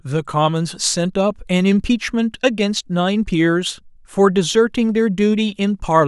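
Nothing in this speech recording stood out as a technical problem on listening.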